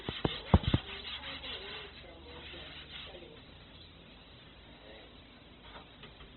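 Throughout, the audio was likely squeezed through heavy Opus compression at a very low rate, consistent with about 12 kbps in music mode. Starved bands are refilled with noise, so these everyday sounds turn grainy and rough, and nothing rises above 4.1 kHz.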